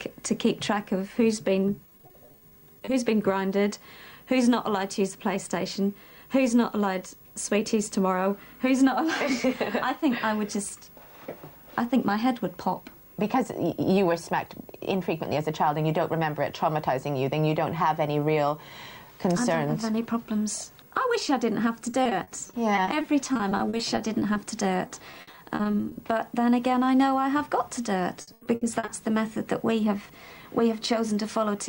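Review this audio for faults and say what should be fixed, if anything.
Repeated packet loss (robotic sound) occurs at 1.75–2.89 s, 21.91–24.37 s, 24.87–25.97 s and 28.21–28.89 s. Short dropouts, up to 80 ms at the end, are patched by extending the preceding audio, giving choppy results with pieces missing. Fix with a larger jitter buffer plus forward error correction.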